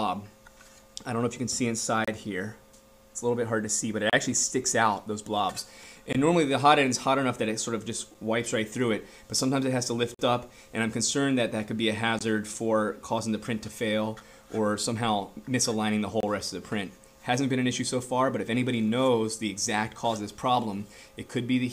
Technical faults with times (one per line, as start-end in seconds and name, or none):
2.05-2.08 gap between stream segments
4.10-4.13 gap between stream segments
6.13-6.15 gap between stream segments
8.14 gap between stream segments
10.14-10.19 gap between stream segments
12.19 gap between stream segments
14.20 gap between stream segments
16.20-16.23 gap between stream segments